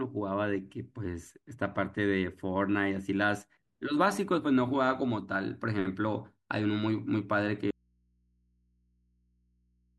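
At 7.71 s the signal feeding the chain was likely interrupted while everything downstream stayed live, producing an audio dropout to a faint residue that runs to the end of the clip. The speech cuts off abruptly rather than pausing or fading. What remains is only low mains hum from the open input, sitting somewhere around 40 dB below the speech level. Nothing of the wanted signal returns before the clip ends.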